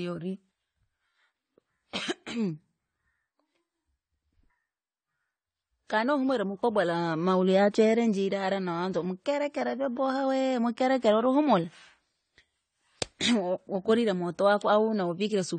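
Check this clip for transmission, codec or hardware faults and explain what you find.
One codec fault runs through the whole recording. The speech sounds dull and smeared from start to finish, with nothing above 9 kHz, and sibilants and sustained vowels carry a fizzy, warbling texture. The likely cause is AAC compression, and the damage fits AAC-LC at a low bitrate of around 32 kbps. At that rate the encoder lowers its cut-off and quantises each frame's frequency lines coarsely, leaving gaps or substitute noise in the upper bands.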